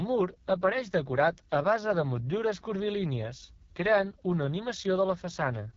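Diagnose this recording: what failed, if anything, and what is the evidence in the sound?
Codec stage: AMR wideband (HD Voice) codec, throughout. The speech sounds rough and raspy, and nothing sits above 7.4 kHz. That fits the lowest 6.6 kbit/s mode.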